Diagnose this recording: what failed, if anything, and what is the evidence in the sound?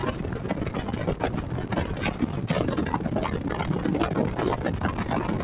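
The call processing stage failed: a noise suppressor applied to music or sounds stays engaged throughout. Held tones and tails sink by roughly 5 dB while onsets pass. Band-limiting at 4 kHz suggests G.711.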